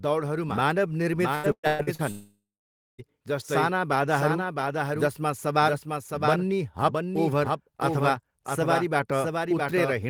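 Across the whole speech clip a second copy of the sound runs roughly 0.7 s behind the first and about 5 dB quieter. This is a doubled audio track, likely from the signal being captured again through a slower path. It differs from a room echo: the trailing copy is full-band, with no decay or reverberant colouring, and it keeps the same fixed lag rather than smearing into a tail.

From 1.35 to 2.02 s the audio turns choppy and robotic. This is repeated packet loss: five short holes open in quick succession, the longest about 117 ms. Each is patched by stretching the preceding sound, so concealment covers more than half of that span. Unlike the doubled track, nothing is repeated at a delay. Pieces are simply missing and papered over with a continuation of the last sound.

Almost immediately after, from 2.11 to 3.01 s, comes a long network dropout, likely a stretch where no packets arrived at all. 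The last sound is held briefly as a fading buzz or hiss, then about 0.57 s of near-silence follows before audio resumes at "साना बाधाहरू", with the intervening material lost. What separates it from the robotic stretch is that it is one sustained gap that decays into silence, not a rapid series of small holes.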